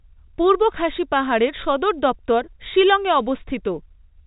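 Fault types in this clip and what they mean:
No faults found; the speech carries the band limit of G.711 mu-law telephone coding, nothing above 3.8 kHz, which fits a 64 kbps line, with no more than faint coding damage.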